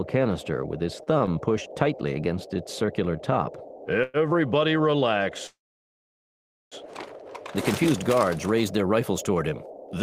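From the start to 7.58 s the audio sounds dull and muffled. De-emphasis was applied wrongly there. A treble cut meant to undo pre-emphasis hit a signal that never had it, or was applied twice, leaving the top sloping down smoothly, about 14 dB lower at 10 kHz than at 1 kHz. Between 1.03 and 1.30 s the sound drags in a repeated stall, a stutter. Packets kept arriving late, so the jitter buffer emptied three times. The receiver stretched the last sound for 56 ms in total, the longest hold 32 ms, and nothing was lost. At 2.86 to 2.91 s there is a short stall from a late packet. One sound is held about 19 ms too long, then continues from the same point with nothing missing. Two call audio freezes follow. The first runs from 4.03 to 4.17 s, a 109 ms hold. The second runs from 5.47 to 6.75 s. Its 1.25 s hold fades, leaving about 1.17 s of silence before the audio resumes where it stopped. Both are likely caused by packets delayed in transit emptying the jitter buffer.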